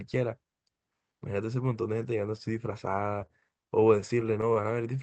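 From 3.26 to 4.79 s, repeated stalls (stutter): the jitter buffer kept running dry, so fourteen short holds of up to 26 ms stretch the speech, appearing as smeared, repeated waveform slivers.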